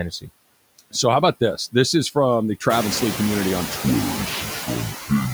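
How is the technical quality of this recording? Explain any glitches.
The recording has two faults: a noise suppressor working over the whole speech clip, and a section near the end that plays back slowly.

Noise suppressor artifacts run throughout. The suppressor estimates steady background noise and pulls those bands down by about 20 dB frame by frame, so the residue pumps, sinking between phrases and rising under the speech. This is most noticeable after the room noise rises by about 14 dB near 2.5 s, where it settles about 10 dB below the speech.

Section at the wrong speed: from 3.84 s to the end, just after "community on", playback runs at 0.605 times normal speed, likely because that stretch was clocked at the wrong rate. Speed and pitch fall together, so the speech drops roughly ten semitones and drags heavily.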